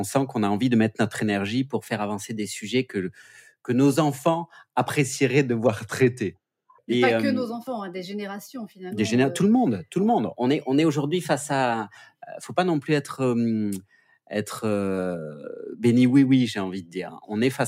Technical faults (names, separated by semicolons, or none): drift correction step